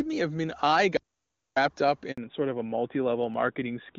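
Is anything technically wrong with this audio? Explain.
Yes, three faults are audible in this speech clip.

From 0.97 to 1.57 s there is an audio dropout to silence: the speech cuts off mid-flow and about 0.6 s of silence follows, with no room tone. The likely cause is a lost input while recording continued. The waveform flatlines and the spectrogram shows a blank vertical band.

At 2.12 s a handover gap of 60 ms appears, as the call switches networks and no speech frames arrive. The sound fades within a few tens of milliseconds into a short hush before resuming. It shows as a narrow flat notch in the waveform and a thin empty column on the spectrogram.

From 2.18 s to the end comes a fallback to narrowband, from AMR-WB at 23.85 kbit/s to AMR-NB at 12.2 kbit/s. Everything above 4 kHz disappears, so the voice turns duller and rougher than the clear wideband speech before it. The spectrogram's upper region goes abruptly empty along a hard horizontal edge.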